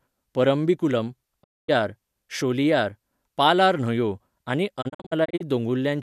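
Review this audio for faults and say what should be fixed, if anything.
Digital broadcast dropout mutes the speech from 1.42 to 1.70 s, then again in short holes scattered across 4.81 to 5.42 s, none longer than 48 ms. The receiver silenced failed frames behind 20 ms fades. Those clean fades, without clicks or repeated fragments, distinguish it from packet-loss concealment. Stronger reception or more error protection would prevent it.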